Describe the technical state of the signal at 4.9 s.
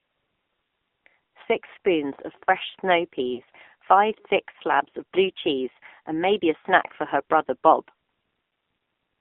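At 4.90 s, just after "five thick" and before "of blue cheese and", a lost AMR speech frame produces a brief dip or warble. The gap is about 20 ms, which fits one failed frame. The AMR decoder hides the missing data by reusing the previous frame's pitch and vocal-tract settings at reduced gain, so the sound briefly smears and softens rather than dropping out completely. The following syllable then resumes weak or rough for a moment.

This moment also carries the AMR narrowband mobile codec damage present throughout the clip. The line band runs from about 250 Hz to 3.6 kHz. The low bitrate, consistent with roughly 7.4 kbps, gives the speech a clearly audible buzzy, synthetic quality. The codec rebuilds speech from a vocal-tract model driven by a small number of pulses per subframe, which is what produces that texture.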